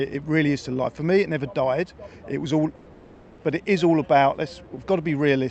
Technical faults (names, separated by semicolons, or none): call audio freeze